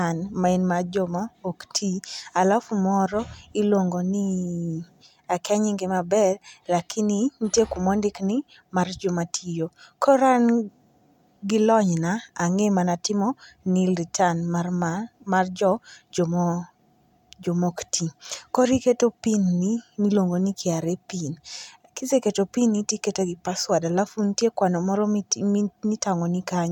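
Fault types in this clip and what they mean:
No faults can be heard.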